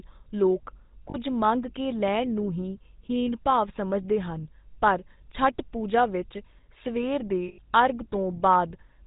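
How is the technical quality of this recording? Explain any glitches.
The recording has poor technical quality: it carries plainly audible telephone-codec damage throughout and has two brief dropouts.

GSM full-rate codec, whole clip: the speech was squeezed through the original GSM coder, which fits its 13 kbps rate. That coder rebuilds the voice from a vocal-tract model fed by sparse, evenly spaced pulses, keeping only a third of the excitation detail, and it cuts everything above 4 kHz. The result is plainly audible: a dull, band-limited sound with a buzzy, gravelly grain.

Lost GSM frames, 1.1 to 1.17 s and 7.48 to 7.59 s: at these points the decoder lost data and filled the gap by repeating the last good frame's settings. The first gap lasts about 40 ms, just before "ਮੰਗ ਕੇ ਲੈਣ ਨੂੰ", which fits two missing 20 ms frames. It is heard as a short metallic smear. The second gap lasts about 100 ms and gives a longer rough, ringing hold.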